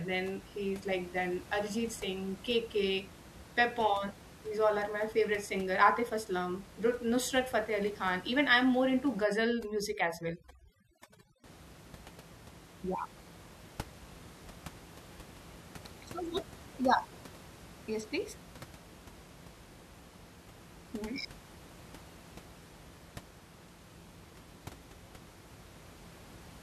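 From 9.24 to 11.44 s the room noise, which elsewhere sits about 20 dB below the voice, collapses into near silence flecked with twinkling specks. This is overdone noise removal: a noise reducer set far too strong pulls individual frequency bands down or out whenever they come close to its noise estimate, so the quieter parts of the voice are stripped along with the background.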